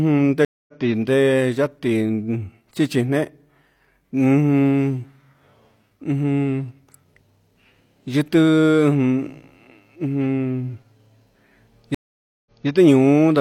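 At 0.45 s the speech drops out for about 0.23 s, ending at 0.72 s. This is a stream reconnect. The connection broke, the player went quiet, then rejoined with a fresh decoder. It resumes a little further on, skipping roughly 0.15 s. A second reconnect starts at 11.95 s. The gap lasts 0.52 s, ending at 12.67 s. This time playback restarts 0.21 s earlier, so a brief stretch of speech plays twice.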